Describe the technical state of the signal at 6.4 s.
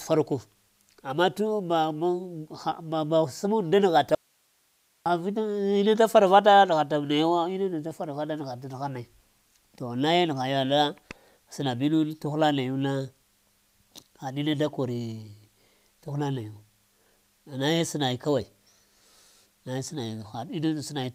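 At 6.4 s the speech signal is intact, with no dropout, clipping, glitch or other fault audible at that point.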